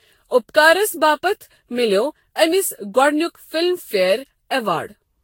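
Throughout, the speech was likely re-encoded about ten times by a lossy codec, causing generation loss: a swirly, hollow, smeared sound with nothing above 16.6 kHz.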